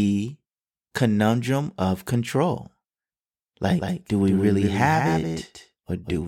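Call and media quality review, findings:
Doubled audio track from 3.79 s to end: abrupt full-band copy about 200 ms behind, roughly 5 dB down, no decay unlike echo; likely a second, slower capture path.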